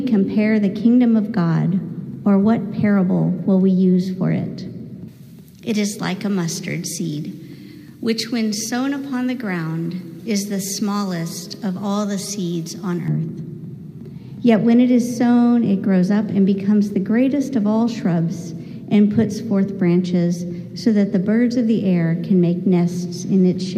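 From 5.08 to 13.08 s the audio jumps bright and thin, with hissy, sibilant highs: classic pre-emphasis left on. The treble lift, about 11 dB at 10 kHz relative to 1 kHz and shaped like a J.17 curve, never got its matching de-emphasis.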